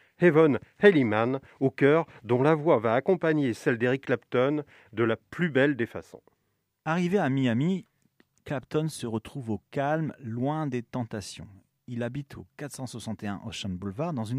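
Speech clip, no audible faults.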